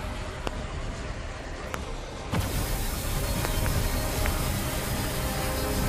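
Loud pops at 0.47, 1.74 and 4.26 s, and a double pop from 3.45 to 3.68 s, spike about 20 dB over the continuing sound, likely from voltage transients.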